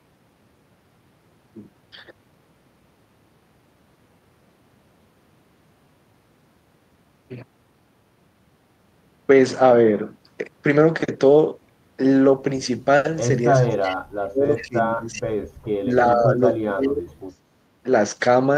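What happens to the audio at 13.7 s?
Right around there, from 13.60 to 14.04 s, the speech ducks hard, dropping by as much as roughly 35 dB. It sounds like speech suppressed in double talk: the echo canceller likely mistook both sides talking at once for its own echo and pulled everything down.

Overlapping that, from 13.69 to 13.96 s, there's a faint echo leak. A copy of the speech comes back about 372 ms late and sits far below the main signal, which points to a loudspeaker echo the canceller likely didn't fully scrub out.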